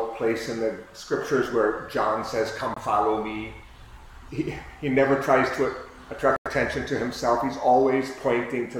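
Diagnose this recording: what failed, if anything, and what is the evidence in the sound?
The codec stage failed with corrupt frame muted: a hard-edged gap at 2.74–2.78 s, consistent with one lost frame, and a longer one at 6.36–6.48 s fitting about four. Damaged frames were rejected and replaced with silence, leaving flat waveform and blank spectrogram columns, with timing kept.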